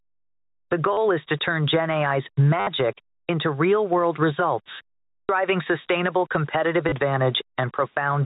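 Throughout the clip, the level was likely rounded to about 8 bits without dither. A grainy, level-following distortion sits roughly 35 dB under the speech and roughens the quieter syllables, beneath the 4 kHz ceiling of the G.711 A-law telephone path.

Also throughout, the input gain was likely set far too high, so a fast limiter pulls it down on each loud syllable. The gain swings by around 15 dB, which sounds pumping and squashed.

At 0.93 s, just before "is to turn", 40 ms of packets were lost and the receiver repeated the last one, which fits 10 ms packets. The result is a robotic stutter buzzing near 100 Hz.

At 2.6 s, just before "into real world results", the same packet loss with last packet repeated recurs for 70 ms, giving a longer buzzing stutter.

At 5.24 s, after "into real world results" and before "sustainable competitive", 60 ms of concealment produces another stutter.

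At 6.89 s, a brief 30 ms repeat adds a short buzz.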